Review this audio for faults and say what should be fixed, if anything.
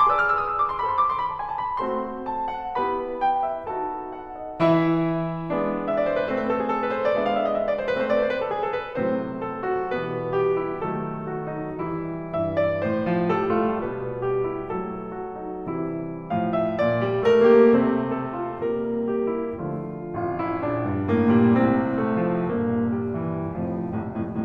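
No faults; nothing needs fixing.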